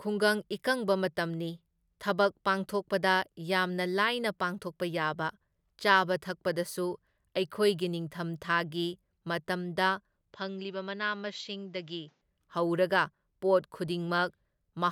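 From 10.33 s to 12.21 s the speech turns duller and quieter, dropping by around 5 dB. The likely cause is an input switched to a poorer device. With no gap at the switch, the spectrogram shows everything above 7.6 kHz cut off and a new noise floor far below the signal. The waveform's envelope shrinks there.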